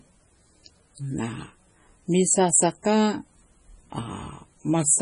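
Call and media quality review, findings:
Speech throughout: watery, swirly texture, smeared consonant onsets, metallic chirp on s sounds. Spectrogram shows a hard ceiling with nothing above 10.5 kHz and speckled holes flickering frame to frame. Likely heavy MP3 compression: treble cut, weak lines zeroed, consistent with a bitrate around 24 kbps.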